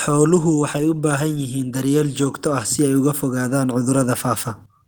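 Automatic gain rising from 1.71 to 4.52 s: the gain control judged the input too quiet and lifted it about 6 dB, so speech and background swell together.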